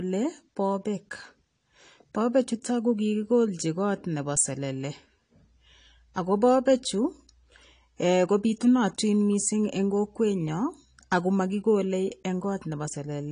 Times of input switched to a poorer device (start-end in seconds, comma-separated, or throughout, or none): none